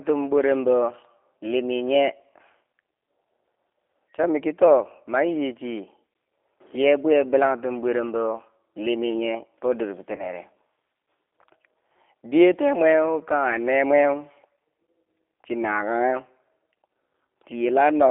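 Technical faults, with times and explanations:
Throughout: G.729 codec. The audio went through a low-rate speech coder that does not send the waveform. It sends a vocal tract filter, a pitch predictor and a few pulses per short frame, and the decoder rebuilds the sound from those. The result is plainly rough and synthetic, consistent with G.729A at 8 kbit/s. The band is held between roughly 300 Hz and 3.7 kHz, which leaves the speech thin, muffled and without any high-frequency air.
10.16 to 10.26 s: VoIP packet loss concealed by the speech codec. About 30 ms of coded audio never arrived, which fits a single lost packet. The decoder filled the gap by repeating its last pitch and filter settings at falling gain, so the sound smears into a brief, fading stretch. Each frame is built on the state of the one before, so the speech stays weakened and distorted slightly past the gap, to about 10.26 s.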